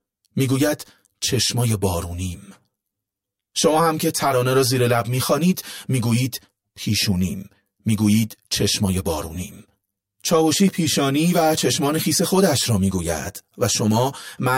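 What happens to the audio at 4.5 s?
At 4.5 s, as throughout the clip, the speech shows channel delay (comb filtering). One channel lags by around 10 ms, so summing to mono cuts regularly spaced notches from around 50 Hz upward, giving a hollow, phasey sound.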